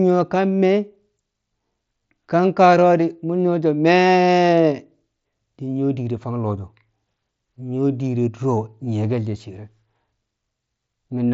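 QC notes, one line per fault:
No faults found in this speech clip. It comes over a Bluetooth mSBC headset link, which keeps it within the band below 8 kHz and leaves a light grain on the louder passages.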